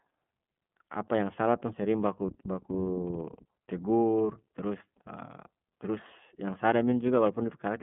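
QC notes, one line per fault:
throughout: iLBC codec. The speech is narrowband, with nothing above about 3.7 kHz. The low end thins out below roughly 150 Hz, like a telephone line. Each 30 ms frame's excitation is coded on its own, so the voice sounds rough and slightly synthetic, and the codec damage is plainly audible. The coarseness fits iLBC's 13.33 kbps mode. The missing top octaves dull the sibilants and take the air out of the voice.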